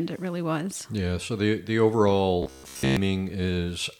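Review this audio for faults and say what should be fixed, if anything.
Robotic sound from repeated short buffers, from 2.43 to 2.97 s: the speech hardens into a rigid, metallic buzz near 67 Hz that still loosely tracks the words. The likely cause is audio arriving too seldom, so playback keeps looping the last 15 ms or so, which matches the buzz's period, while the real signal in between is skipped. Most of that half-second is made of these repeats. Enlarging the jitter or playback buffer and fixing the late delivery upstream would prevent this.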